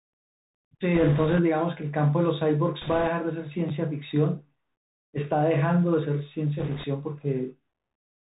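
The whole clip comes through the Bluetooth CVSD headset codec, which fits a 64 kbps link. Everything above 4 kHz is gone, s sounds go scratchy, and a grainy hiss sits underneath. Then there are bit errors on the Bluetooth voice link from 0.95 to 1.39 s, 2.82 to 3.08 s and 6.59 to 6.85 s. At an error rate of roughly a few percent, they bring a rushing crackle but no sharp clicks.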